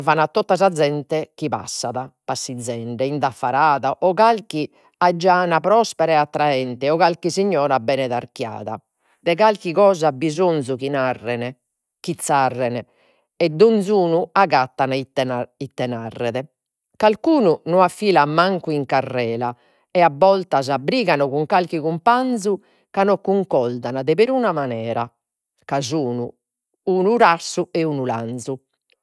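Speech recording with no technical faults to report.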